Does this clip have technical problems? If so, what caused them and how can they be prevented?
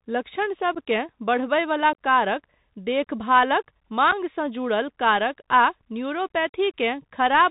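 Yes. The speech runs through a Bluetooth CVSD headset codec for its whole length. The damage is plainly audible. The audio is narrowband, with nothing above 4 kHz. The codec sends one bit per sample, only up or down, with an adapting step. That fits a 64 kbps CVSD link. Fast, loud high content outruns the step and distorts. S sounds turn scratchy. A granular hiss sits under the voice. Prevent it by using a wideband headset mode such as mSBC or LC3.

There is also unconcealed Bluetooth headset packet loss, three times. At 0.75 to 0.77 s, about 11.2 ms drops out just before "बढ़बयवला कारक देखभालक". At 1.93 s, 15.0 ms vanishes just before "कारक देखभालक". At 4.11 to 4.13 s, 7.5 ms goes missing right after "बढ़बयवला कारक देखभालक". Each time a few short voice packets between headset and phone were lost. Nothing filled the gap, so each is a brief hole with abrupt edges. Prevent it by keeping the headset close to the phone, away from radio interference.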